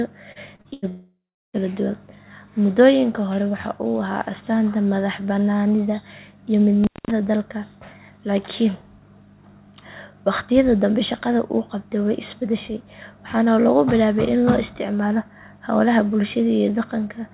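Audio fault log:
0.32–0.85 s, repeated packet loss (robotic sound): four gaps opened in quick succession, the longest about 89 ms. Each hole was patched by stretching the preceding sound, so about a third of this stretch is synthetic fill, giving choppy speech with fragments missing.
0.88–1.56 s, long network dropout: a likely break in the network stream left roughly 660 ms of audio undelivered. The receiver first extended the last sound as a fading buzz or hiss, then gave up, leaving about 340 ms of silence before speech resumes with that portion simply gone.
6.84–7.11 s, intermittent contact: a loose cable or plug briefly opened the line for about 210 ms. The speech drops out abruptly with crackles at both edges, and only faint hiss remains while the connection is broken, all within a band that stops at 4 kHz.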